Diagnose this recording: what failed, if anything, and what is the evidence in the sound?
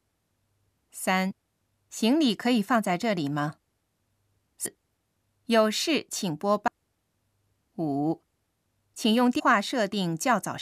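Codec stage: the decoder is dropping compressed frames. At 1.30–1.32 s, 4.65–4.67 s, 6.67 s and 9.38–9.41 s the speech lurches forward, losing roughly a fifth of a second each time (a bit less at the last one). The joins are short smeared blips, not sharp clicks, because adjacent frames overlap. The jump sizes point to frames of about 23 ms that were missing from the file or rejected as corrupt.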